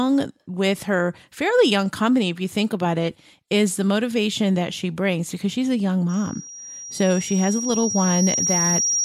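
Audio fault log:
6.09–9.05 s: loudspeaker feedback squeal. A single pure tone near 5.7 kHz rises out of the speech at 6.09 s and swells over about three seconds, ending up roughly as loud as the speech itself when the clip stops. The microphone is hearing its own loudspeaker, and at that one frequency each trip round the loop returns more than it sent, so the tone keeps feeding itself. A spectrogram shows one bright horizontal line at 5.7 kHz that thickens steadily. The waveform's envelope swells smoothly beneath the speech.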